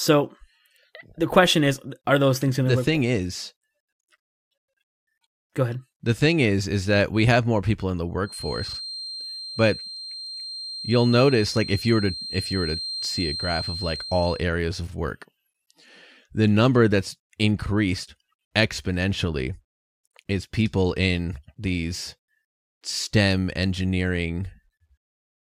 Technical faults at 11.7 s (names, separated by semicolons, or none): feedback whistle